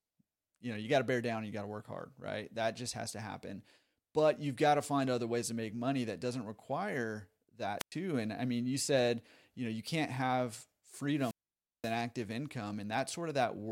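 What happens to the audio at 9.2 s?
Nothing goes wrong at 9.2 s; the speech there plays through without any dropout, click, distortion or other audible fault.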